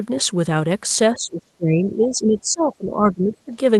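From 1.13 to 3.52 s the speech dips and thins in stretches totalling around two seconds, falling by as much as roughly 20 dB. This is speech suppressed in double talk, likely an echo canceller ducking the near talker while both sides spoke.

Between 1.86 and 2.07 s a faint second voice, about 25 dB under the speech, comes through. This is the other side's voice leaking through, likely loudspeaker echo the canceller failed to remove, heard over a call path whose roughly 12 kHz bandwidth fits Opus.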